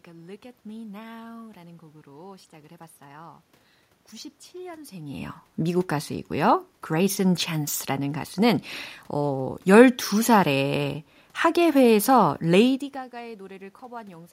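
No technical faults can be heard in the recording. A background noise from the room sits under the speech, and the level shifts around 5 seconds and again near 12 and a half seconds, as the talker moves relative to the microphone.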